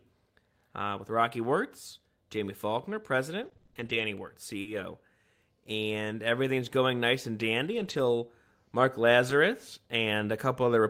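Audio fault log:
3.41–4.79 s: repeated packet loss (robotic sound). Eight separate dropouts hit this 1.4 s stretch, with the longest about 40 ms and 180 ms filled in total, roughly 13% of the span. Each hole is bridged by extending the preceding sound, and the next hole arrives before the stream settles. The result is choppy speech with small pieces missing.
7.73–7.99 s and 9.29 s: lost packet rebuilt from error correction. The first event comes right after "everything's going nice and" and is a 140 ms run of rebuilt audio, which fits seven separately lost 20 ms frames. The second is a single 20 ms frame. In both places the decoder played low-bitrate redundant copies carried in the following packets, so there is no gap, but those moments sound rougher and noisier than the surrounding audio.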